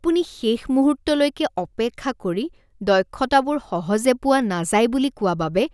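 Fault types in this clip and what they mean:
No technical faults can be heard anywhere in the recording; the signal stays continuous and stable throughout.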